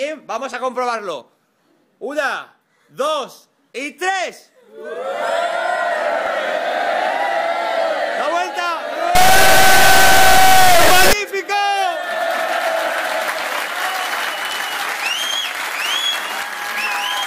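From 9.15 to 11.13 s, 32-bit integer samples are read as 32-bit float, an integer read as float fault, producing an extremely loud buzzing square wave.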